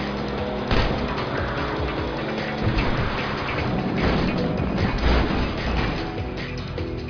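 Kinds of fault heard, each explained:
No technical faults are heard anywhere in the audio.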